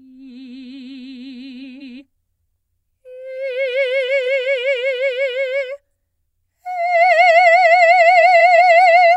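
Frames out of order at 1.62–2.01, 4.08–4.43 and 8.21–8.60 s: adjacent 186 ms blocks play swapped, a garbled flutter with three sharp spectrogram seams.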